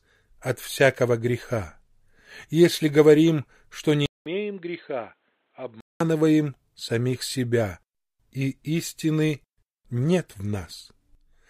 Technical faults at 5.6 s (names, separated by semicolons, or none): input switched to a poorer device